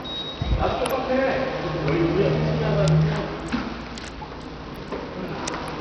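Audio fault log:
throughout Bluetooth SBC compression. Nothing above 14.2 kHz, and gritty noise rides on the sound. This is likely a starved bit pool, fitting about 64 kbps, coarsely quantising the sub-bands.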